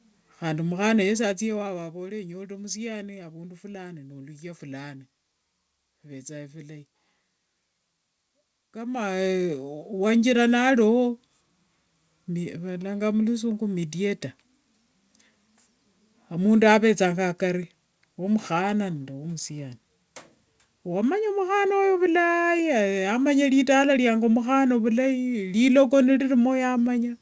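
Nothing in this speech clip stood out as a technical problem on listening.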